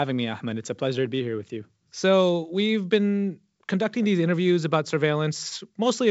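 No technical faults detected.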